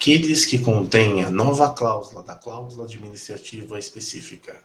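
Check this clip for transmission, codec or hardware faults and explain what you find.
Two faults can be heard: an automatic gain rise and a short concealed packet loss.

Automatic gain rising runs from 1.83 to 4.34 s. The speech level drops by about 17 dB at the microphone, consistent with the talker moving away around 1.5 s. The gain control reads this as an input that is too quiet and slowly lifts its gain by about 4 dB. Voice and room noise swell together over more than two seconds. A talker moving closer would raise only the voice. Here the background comes up with it, and the rise is slow.

Short concealed packet loss occurs from 3.49 to 3.53 s, while the gain is still rising. About 20 ms of audio arrived too late to decode. The receiver covered the gap by extending the last sound for roughly 18 ms, shaping it from the preceding pitch or as noise, then blending back into the real signal. 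It sounds like a brief smear or wobble in the speech. A level change would be gradual, but this is a momentary texture glitch that could drop a short consonant.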